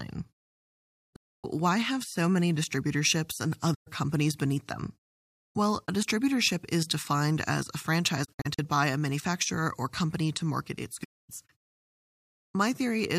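AAC frame loss with muting opens soft-edged holes at 1.16–1.44 s, at 3.74–3.88 s between "so many distributorships and" and "companies beneath them", at 8.24–8.59 s after "is defined as a" as several short dropouts (the longest around 70 ms), and at 11.03–11.30 s after "company to market its". Lost frames were decoded as silence, so the overlapping windows fade the sound out and back in.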